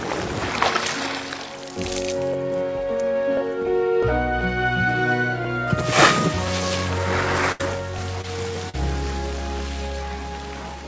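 From 0.26 s to 10.63 s, a click recurs every 1.04 s, about ten in all. These are clock drift buffer slips, likely from two clocks disagreeing by several hundred parts per million, so the buffer periodically drops or repeats a few dozen samples.

At 7.52 to 7.61 s there is a burst of packet loss. About 80 ms of audio never arrived. The receiver extended the preceding sound for 75 ms while fading it down, giving a held, decaying tone or hiss before the sound resumes further along.

Short concealed packet loss follows at 8.21 to 8.25 s (20 ms missing) and 8.69 to 8.75 s (40 ms missing). Each hole was filled by continuing the last sound and then blending back, heard as a brief smear or wobble. The G.722 call path leaves no content above 8 kHz.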